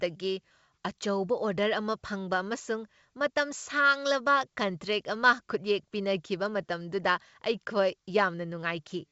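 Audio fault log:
No faults turn up here, just speech carried over G.722 wideband telephone coding at 64 kbit/s, which keeps the sound clear up to around 7 kHz with at most a faint trace of the coding.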